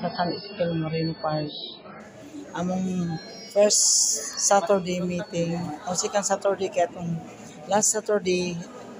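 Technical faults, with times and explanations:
0.0 to 2.0 s, adaptive stream starting at a low bitrate: the opening plays from a heavily compressed version of the stream. Nothing reaches above 5.3 kHz, so the top end is gone and the sound is dull and smeared, with strong codec artefacts. This points to a very low MP3 rate, around 16 kbit/s. At 2.0 s the player switches to a far better stream, near 128 kbit/s. Clarity returns abruptly, with no gap.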